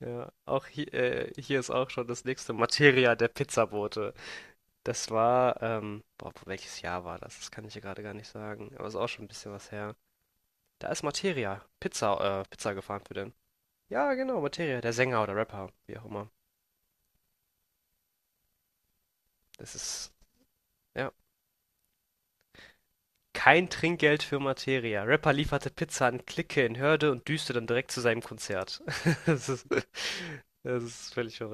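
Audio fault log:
No faults found in this speech recording; nothing audible calls for correction.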